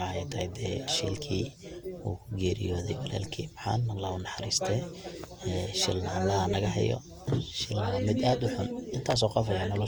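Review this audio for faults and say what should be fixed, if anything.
Throughout the speech there is a swirly, hollow smearing with blurred consonant attacks, likely from generation loss: about four rounds of lossy encoding, consistent with Opus at around 64 kbit/s. Each pass requantises on a shifted frame grid, so noise and spectral holes accumulate. A single encode at that rate would sound cleaner, since bandwidth still reaches 20.2 kHz. To prevent it, keep a lossless master and encode only once at the end.

DC steps occur at 1.14 s, 3.24 s and 6.54 s, each a low thump as the waveform's zero line jumps. The offset then decays away, as if through a 5 Hz high-pass. Unlike a plosive or dropout click, the speech carries on unaffected. To prevent it, keep input switching and converter recalibration out of live recording.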